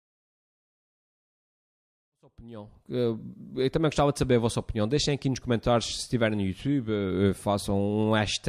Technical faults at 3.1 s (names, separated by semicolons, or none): none